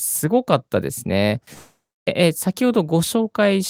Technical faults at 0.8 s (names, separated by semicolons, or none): none